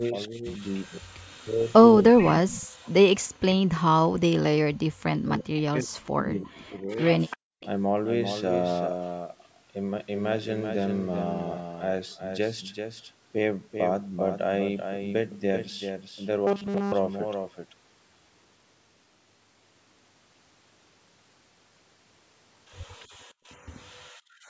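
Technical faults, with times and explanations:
Throughout: doubled audio track. Everything is heard twice, with a second full-band copy trailing around 400 ms behind and roughly 5 dB quieter. It carries no added decay or room colour, so it sounds like a flat, hard repeat, not reverberation. The likely cause is the same audio being captured again by a slower path, or two copies held out of step, so both get mixed into one track.
0.0 to 6.98 s: speech suppressed in double talk. Across roughly five seconds of this opening stretch, the talker's level sinks and parts drop away, at the deepest by around 40 dB. This likely happened because both sides were speaking at once, and the echo canceller, unable to tell this talker from the loudspeaker echo, turned everything down together.
2.19 to 2.87 s, 6.99 to 7.67 s and 22.9 to 23.05 s: echo leak. A faint delayed copy of the voice surfaces 347 ms after the original in each of these spots. 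It sits about 20 dB below the speech in the first, about 15 dB below in the second, and about 35 dB below in the last. The likely cause is a far end playing the call on a loudspeaker, where its echo canceller let some of that pickup through and sent it back.
7.37 to 7.6 s and 23.07 to 24.5 s: background gated by the echo canceller. The room sound briefly collapses, about 40 dB down for roughly 200 ms in the first case, and then some 38 dB down across about a second near the end. It returns once the suppression releases. This happens because the echo canceller clamped the microphone hard while the loudspeaker was active, taking the ambient noise floor down with it.
16.47 to 16.92 s: robotic sound from repeated short buffers. For under half a second the voice turns into a rigid, metallic buzz pinned at 200 Hz, loosely tracking the speech underneath. Most of this stretch is repeated material, not fresh audio. 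Audio likely arrived too seldom, so the software looped the most recent short chunk, and a 200 Hz buzz fits a buffer about 5 ms long, while the real signal was skipped.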